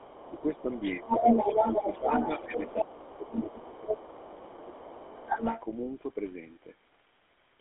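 A GSM full-rate codec carries this speech, which fits a 13 kbps line, leaving a buzzy, gravelly roughness throughout and a band of 250 Hz to 3.5 kHz, with nothing above 3.8 kHz. The talker's echo canceller likely let the loudspeaker signal through, so the other side's voice leaks in from 0.00 to 4.82 s and again from 5.08 to 5.62 s, sitting around 5 dB above the talker. With both sides talking at once, the same canceller has likely suppressed speech during double talk, pulling the talker down by as much as 15 dB, about 10 dB at 1.71 to 2.12 s, in dips at 0.23 to 1.27 s, 2.47 to 3.99 s and 4.43 to 5.28 s.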